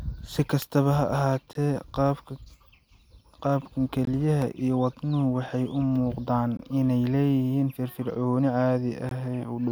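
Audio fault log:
0.62 s and 4.42 s, electrical switching spike: a sharp snap sits on top of the speech, the second just before "iyo wadnuhu waxay u". Each lasts only a few milliseconds, most likely a nearby switch or discharge arcing and being picked up by the audio line.
1.53 s, 4.05 s, 6.57 s and 9.09 s, gap between chunks: a 20 ms hole recurs every 2.5 s, including just before "iyo wadnuhu waxay u" and "inay leeyihiin firfircooni". The audio was delivered in 2.5 s chunks, and silence was inserted at each join without losing any sound.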